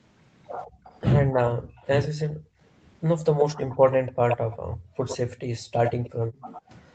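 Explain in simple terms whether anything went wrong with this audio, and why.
Several things went wrong, all tied to the call's echo canceller, the part of a speakerphone setup that tries to stop the loudspeaker's sound from being sent back.

Background gated by the echo canceller: between 0.67 and 2.6 s, and again between 4.65 and 6.45 s, the room sound behind the talker dips or briefly vanishes. The canceller heard its loudspeaker playing and turned the microphone down hard to block it, taking the background with it. The first stretch loses about a third of a second in total. The second loses about 0.7 s and drops deeper, close to silence at its worst.

Echo leak: a delayed copy of the speech comes back. From 0.84 to 2.08 s it trails the original by about 149 ms and is faint. From 3.39 s to the end it arrives about 104 ms late and is nearly as loud as the speech itself. The likely cause is that the far end plays the call on a loudspeaker and its canceller failed to remove everything its microphone picked up.

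Speech suppressed in double talk: the talker's voice dips or cuts out in short pieces from 1.23 to 2.31 s, about 0.3 s in all and very deep at the worst point. It happens again, more mildly, from 3.81 to 4.37 s, for about 0.15 s. This is likely because both sides were speaking at once and the canceller, unable to tell the talker from the echo, turned both down.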